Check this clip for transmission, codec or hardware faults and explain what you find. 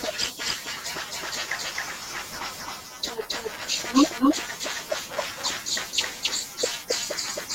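One fault runs through the whole clip: a doubled audio track. The speech plays twice. A second copy trails the first by around 300 ms, at roughly the same level. The likely cause is a slower second capture path or an edit holding two offset copies. It sounds like a dry, flat echo, with no room tail.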